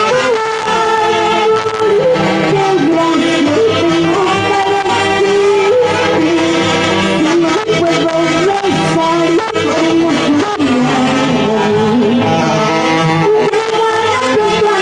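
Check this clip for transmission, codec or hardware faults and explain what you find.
No faults can be heard anywhere in the clip. Nothing in the sound calls for any further explanation.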